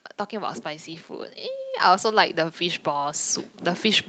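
A speech clip carried over a call path that stops at 8 kHz, with automatic gain rising from 1.83 s to the end: the gain control slowly lifts the level, and voice and background noise swell together, unlike a louder talker, whose noise floor stays put.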